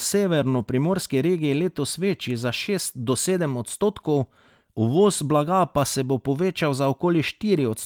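Speech recording with no audible technical faults.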